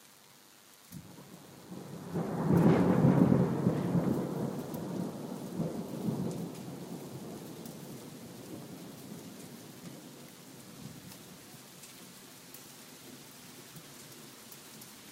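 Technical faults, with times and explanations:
Throughout: DECT cordless phone buzz, a thin, steady buzz sitting well below the main sound, pulsing 100 times a second because a nearby handset or base transmits a radio burst every 10 ms that the audio circuitry rectifies. Unlike smoother mains hum, its sharp pulses carry a dense stack of harmonics.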